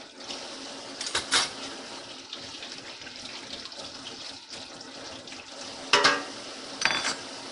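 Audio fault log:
Throughout: Nellymoser compression. The sound has a rough, hissy halo and a smeared, underwater quality, and the damage is plainly audible. Nothing reaches above 10.7 kHz. The likely cause is the Nellymoser Asao codec, the old Flash microphone codec, at a rate that fits roughly 44 kbps. It codes short blocks with a fixed, small bit budget. Weak bands get no bits and are filled with noise. That substitution makes the hiss, and the block coding smears detail.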